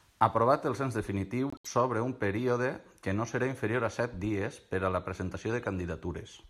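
Corrupt frame decoded, from 1.50 to 1.67 s and again at 5.63 s: in this speech clip, damaged bits in compressed frames were played rather than concealed, so misread gains and codes put energy at the wrong frequencies for each bad frame. The first run spans several consecutive frames and comes through as a burst of chirpy noise peaking at about -30 dBFS. The second, shorter event touches a couple of frames and is a faint blip near -45 dBFS.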